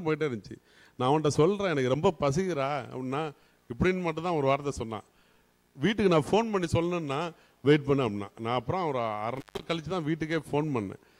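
Between 9.36 and 9.65 s the sound drops out for about 200 ms with crackle at both edges, the mark of an intermittent contact, where a loose cable or plug briefly opens. Unlike a clean digital dropout, the break carries crackle and faint hiss instead of silence.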